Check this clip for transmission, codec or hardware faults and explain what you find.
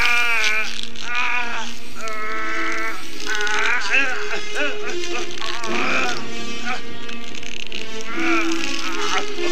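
Nothing here points to a transmission, codec or hardware problem; the audio runs steady from the first moment to the last without any glitch worth flagging.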